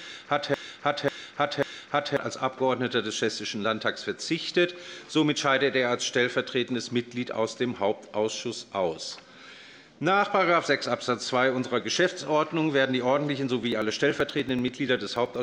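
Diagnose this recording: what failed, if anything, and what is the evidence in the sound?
The clip opens mid broken-record loop: from 0.00 to 2.17 s, a 0.54 s fragment repeats exactly, back to back, three times. That points to a playback or stream stall, likely the player re-sending its last held buffer, so the original audio there is gone.

Near the end, from 13.63 to 15.36 s, there's a steady tick roughly every 96 ms, about twenty in all. These are periodic USB or driver dropouts. Each tick is a few milliseconds of audio skipped outright when something blocks the bus or driver on a fixed schedule.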